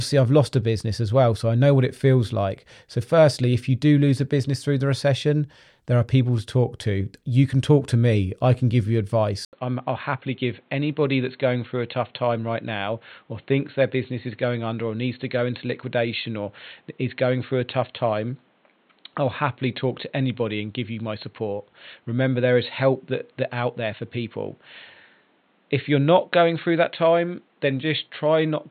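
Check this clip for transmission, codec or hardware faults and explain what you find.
One fault runs from 9.45 s to the end of the speech: the input likely switched to a poorer device just after "I can give you". A gap of about 80 ms marks the switch. From there the new path passes nothing above 4.3 kHz, so the speech turns dull and boxy and loses its crisp consonants. The level also drops by roughly 5 dB, and a new background noise appears, sitting well below the speech.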